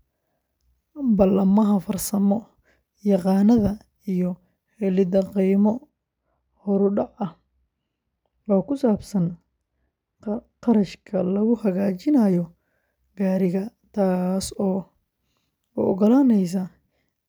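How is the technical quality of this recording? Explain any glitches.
The recording has one clear fault, confined to the middle of the speech. From 5.89 to 11.54 s, de-emphasis is applied wrongly: a treble-cut filter meant to reverse a pre-emphasis boost is acting on audio that was never boosted, or has been applied a second time. The high end therefore rolls off smoothly and progressively, sitting about 13 dB down at 10 kHz relative to 1 kHz. The speech in that stretch sounds dull and muffled, with softened consonants, then regains its brightness once the filter drops out.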